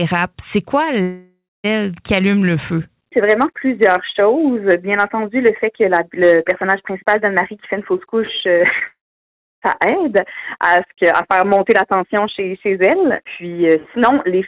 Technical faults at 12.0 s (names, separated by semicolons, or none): none